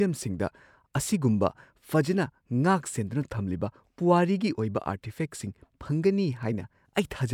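No technical faults are audible anywhere in the speech recording.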